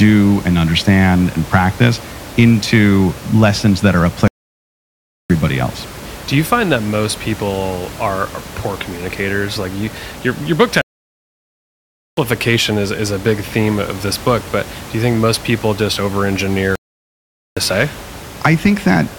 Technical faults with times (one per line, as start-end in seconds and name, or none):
4.28-5.30 playback stall
10.81-12.17 playback stall
16.75-17.57 playback stall